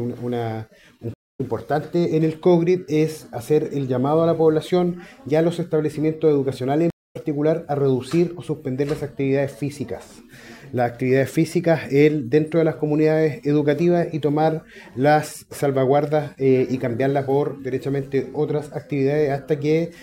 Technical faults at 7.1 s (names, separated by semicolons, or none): stream reconnect